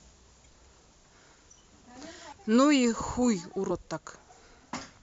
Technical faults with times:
0.44 compressed frames skipped
2.32 compressed frames skipped

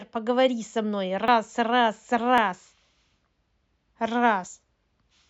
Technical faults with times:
1.28 dropped buffer (overrun)
2.38 dropped buffer (overrun)
4.47 dropped buffer (overrun)

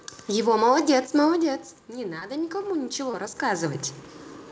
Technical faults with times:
1.86-3.88 automatic gain rising
2.20-2.23 short concealed packet loss
3.11-3.15 short concealed packet loss

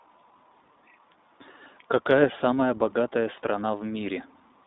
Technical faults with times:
0.00-4.66 iLBC codec

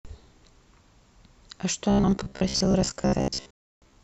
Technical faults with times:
1.90-4.03 robotic sound from repeated short buffers
3.51-3.82 digital broadcast dropout

